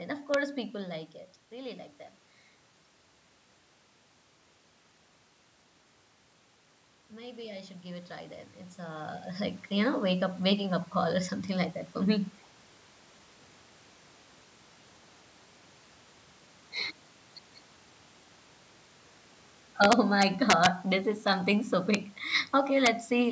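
Speech with integer overflow cracks at 0.34 s before "people like it really", 19.84 to 20.66 s (peaks about 4 dB over), 21.95 s after "this is something so", and 22.86 s, where peaks wrap sign instead of clipping.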